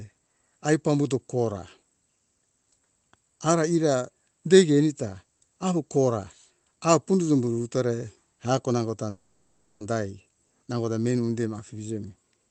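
Speech carried over a call link whose audio tops out around 8 kHz. From 9.09 to 9.82 s a call audio freeze occurs, likely because packets stalled in transit and the jitter buffer emptied. The receiver stretched the last sound into a fading buzzy fill for about 0.71 s, then resumed where it left off, so nothing is lost but everything after lands that much later.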